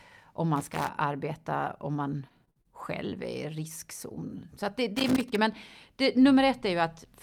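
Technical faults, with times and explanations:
0.56–0.89 s and 4.96–5.36 s, loose connector crackle: two irregular bursts of crackle and scratching, the second ending just before "men det". A worn or dirty contact is making and breaking as it shifts, chopping the signal on and off. Unlike network dropouts, nothing is smoothed over or repeated. The sound is torn by raw, uneven noise with no regular rhythm.
1.97–3.13 s, repeated packet loss (robotic sound): five separate holes hit this stretch, about 120 ms missing in total, the longest 46 ms. Each gap is patched by stretching out the sound just before it, so roughly 150 ms is rebuilt rather than real. Because the fills come one after another, the speech turns choppy, with pieces missing. That is different from connector crackle, which adds scratchy noise instead of smeared, looped fragments.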